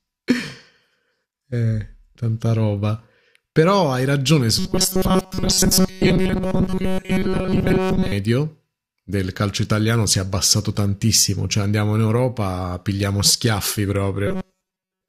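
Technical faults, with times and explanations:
4.59–8.12 s and 14.27–15.09 s, robotic sound from repeated short buffers: The speech turns into a stiff, metallic buzz that still loosely tracks the syllables. The buzz sits at a fixed 188 Hz and ignores the natural pitch. The likely cause is new audio arriving too slowly, so the player loops a tiny slice, about 5.3 ms long, to fill the gaps. Most of the sound in these stretches is repeated material, and the real audio between repeats is lost.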